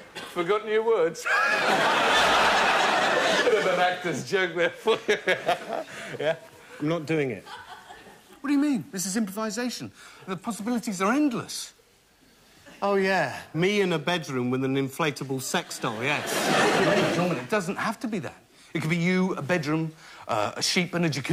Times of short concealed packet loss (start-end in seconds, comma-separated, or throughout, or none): none